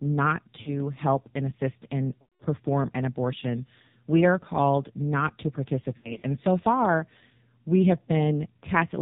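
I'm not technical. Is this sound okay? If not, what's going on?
No. Throughout, the voice sounds muffled, buzzy and robotic, with nothing crisp at the top. That is the AMR narrowband mobile codec, an old phone-call format that squeezes speech hard.

Around 0.62 to 0.74 s, 2.22 to 2.42 s, and 5.98 to 6.23 s, the voice briefly smears, warbles or fades out. These are lost AMR speech frames: chunks of the call dropped in transmission, with the phone guessing to fill the gaps.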